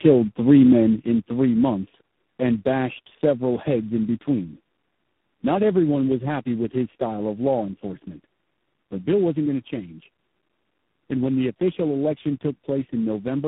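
From the first moment the speech sounds rough, dull and warbling, with a grainy, smeared texture and nothing above 3.9 kHz. This is tandem speech coding: the signal passed through three low-bitrate speech coders one after another, each decoding and re-encoding what the previous one had already damaged. The artefacts stack up, so the result is harsher and more muffled than a single narrowband codec would leave it.

At 1.02 s the whole signal, speech and background alike, drops abruptly by about 4 dB in a single step and stays at the lower level. There is no fade, just a sudden shift in loudness. This is a microphone volume stepped down, most likely the call software cutting the input gain on the capture device because it judged the microphone too loud.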